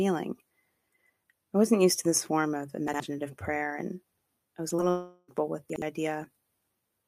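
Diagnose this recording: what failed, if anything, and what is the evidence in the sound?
Chunks out of order, at the buffering or jitter-buffer stage, appear at 2.88 to 3.0 s and again at 5.7 to 5.82 s. In each, a 60 ms block of speech plays one slot late, after the block that should follow it, so the phrase stutters and jumbles briefly at the hard joins. Unlike packet loss, nothing is missing or smeared. The real audio is all there, just swapped in order.

Short concealed packet loss, a network fault, shows as two brief smears at 4.69 to 4.73 s and 4.77 to 4.80 s. Each time about 20 ms of the stream arrived too late to decode, and the receiver bridged the gap by extending the preceding sound before blending back into real audio. Unlike the reordered chunks, the original material in these gaps is gone, and what fills them is a synthetic continuation of the sound just before.

A long network dropout is the likely cause of the stretch from 4.9 to 5.30 s. 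For about 0.4 s the speech gives way to a drawn-out continuation of the last sound, a buzz or hiss that carries on almost to the end with no fall into silence, and then the real audio resumes further along with that portion lost. Its length separates it from the two 20 ms blips just before it.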